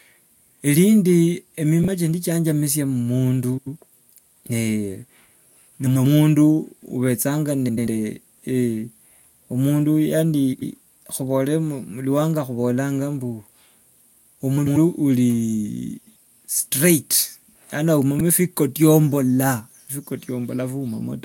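Frames out of order at 1.82, 3.57, 5.86, 7.68, 10.52, 14.57, 15.98 and 18.18 s: adjacent runs of frames, roughly 93 ms each (42 ms at the first), swap places, giving brief garbled flutters.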